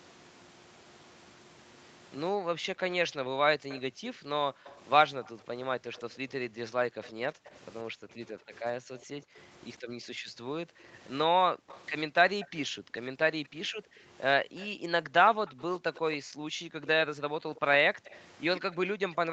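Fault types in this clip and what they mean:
Background gated by the echo canceller: While the loudspeaker was playing, the echo canceller turned the microphone down hard, by up to about 40 dB. From 2.31 s onward the room sound repeatedly dips or disappears, then comes back when the canceller releases.
Echo leak: A loudspeaker-side echo canceller likely failed to remove all of what its microphone picked up, and the remainder was sent back. Five times between 3.69 and 18.6 s, a faint copy of the speech trails 106 to 129 ms behind, roughly 20 to 25 dB down.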